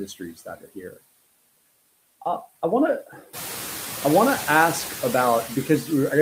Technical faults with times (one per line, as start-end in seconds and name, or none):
0.00-6.21 noise suppressor artifacts